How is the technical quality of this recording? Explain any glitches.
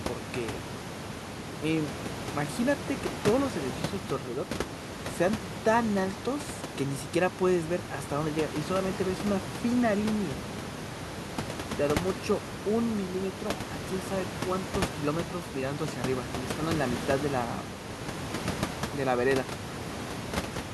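No technical faults are audible.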